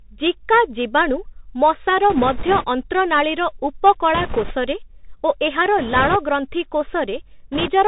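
A speech recording, narrowband and dull with nothing above 4 kHz, with scratchy s sounds, a granular hiss under the voice and loud bright sounds that smear into distortion, all from a Bluetooth CVSD headset codec. That one-bit up-or-down coding, which fits a 64 kbit/s link, lets the adaptive step lag behind fast waveform changes. A rushing, crackly noise without sharp clicks rises at 2.1–2.66 s (just after "ଜିକା ଜୀବାଣୁ ମଶାର"), 4.14–4.54 s, 5.78–6.16 s and 7.52–7.71 s. These are bit errors on a Bluetooth voice link, with a few percent of bits flipped. Each bit carries little weight and the errors fade, so they spread into noise.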